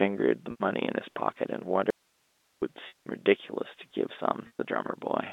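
Speech over a G.711 A-law telephone line, with the band held to roughly 250 Hz to 3.7 kHz. Three packet losses with pitch repetition occur, at 0.51 s for 90 ms, 2.88 s for 180 ms, and 4.47 s for 120 ms. In each gap the receiver repeats the last pitch period and fades it out over about 50 ms. The sound holds briefly as a buzzy tone, then drops to silence. Speech returns through a short cross-fade. The 180 ms gap has the longest silence. The gap lengths fit runs of 30 ms packets. There is also an audio dropout to a faint residue from 1.90 s to 2.62 s. The speech cuts off abruptly and comes back just as suddenly. Only hiss remains in the gap, roughly 40 dB below the speech. That hiss means the path after the break stayed live. The likely cause is that the wanted signal was lost upstream while the line carried on.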